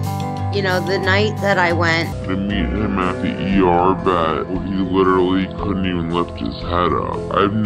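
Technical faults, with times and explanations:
2.12–7.66 s, section at the wrong speed: from 2.12 s to the end, the audio is likely being played against the wrong clock, running at 0.648 times its recorded speed. Because playback slows without any pitch correction, time and pitch drop together at the same instant: everything after the switch is drawn out to roughly one and a half times its natural length and sits about seven semitones lower, giving the sound a heavy, sluggish, deepened character.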